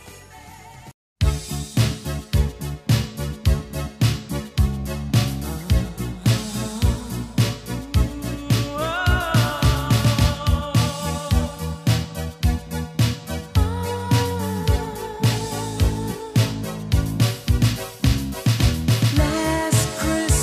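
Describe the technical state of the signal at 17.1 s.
At 17.1 s the signal is intact, with no dropout, distortion, glitch or other fault audible at that point.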